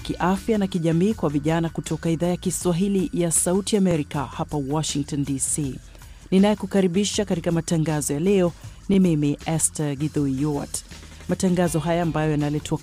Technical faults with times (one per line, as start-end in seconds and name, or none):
3.91-3.94 overlapping chunks
8.94-8.96 overlapping chunks